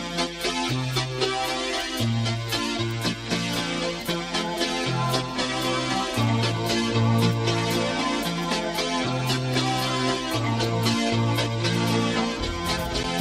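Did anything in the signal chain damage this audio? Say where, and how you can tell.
No, nothing along the chain has left an audible mark on this audio, from the wiring and converter through to storage and playback.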